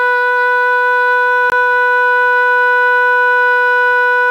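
Right from the start there's a constant, even hiss under the music. That's low bit depth with dither: the audio has only 8 bits, with dither added before rounding, so the error turns into steady white noise, sitting roughly 40 dB below the music, with no distortion.

At 1.50 s the music drops out for 20 ms, to 1.52 s. That's a block of digital silence, where a stretch of samples was replaced by zeros. The cut in and out has no fade, leaving a short hole.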